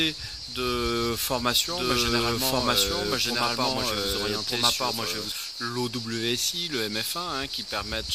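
From 1.66 to 5.32 s, a doubled audio track: an equally loud copy trails by about a second, likely from a slower second capture path, showing as repeated waveform shapes with abrupt edges.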